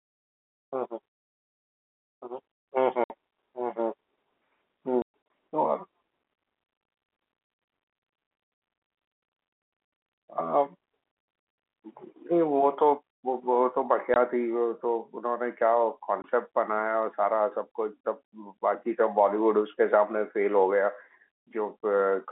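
Packet loss filled with silence cuts the narrowband telephone-band speech at 3.04 s (60 ms), from 5.02 s (180 ms missing across 280 ms, longest gap 120 ms), and at 14.14 s and 16.22 s (20 ms each). The lost stretches are replaced by silence, so the speech drops out in hard-edged holes. Their lengths fit 20 ms packets.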